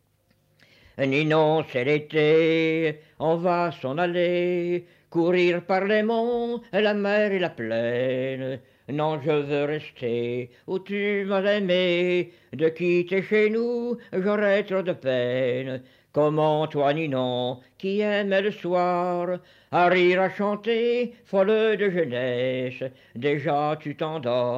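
Nothing in the audio stood out as a technical problem on listening.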